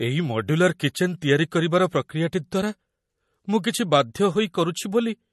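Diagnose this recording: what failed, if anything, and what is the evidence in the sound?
Codec stage, MP3 compression: a bit-starved encoder, likely near 40 kbps, removed everything above 12 kHz and switched weak lines on and off, so the speech sounds watery and swirly throughout.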